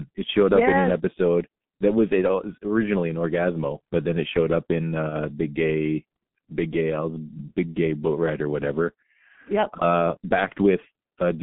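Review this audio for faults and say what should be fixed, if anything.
Throughout the clip the speech carries G.723.1 codec damage. The band stops near 3.5 kHz and rolls off below about 150 Hz, and the slow-updating vocal model leaves the voice muffled and hoarse, with smeared consonants. The heavy coarseness fits the 6.3 kbit/s mode. On a spectrogram, nothing shows above 3.5 kHz and the harmonics look blocky in 30 ms steps. Fricatives lack their high-frequency hiss. Use a wideband codec such as Opus or G.722 instead of G.723.1.

From 5.09 to 5.15 s there is VoIP packet loss concealed by the speech codec. The gap is about 30 ms, consistent with a single lost frame. The decoder filled it by repeating its last pitch and filter settings at falling gain, so the voice is briefly stretched into a fading synthetic sound and stays weak for a moment after real packets resume. On a waveform, the envelope dips and the cycles repeat too regularly. 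On a spectrogram, the harmonic lines are frozen flat across the gap. A larger jitter buffer with forward error correction or redundancy on the link would prevent the loss from being heard.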